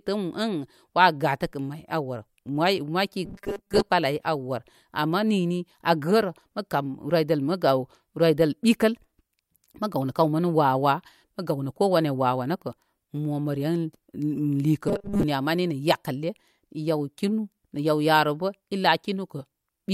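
At 3.25 s the speech turns into robotic sound from repeated short buffers, lasting until 3.91 s. It returns from 14.88 to 15.23 s. Both stretches carry a rigid, metallic buzz at 200 Hz. The likely cause is audio arriving too seldom, so the software loops the last few milliseconds to fill the gap. The 200 Hz buzz fits a 5 ms repeat. Most of the real audio in these stretches is skipped.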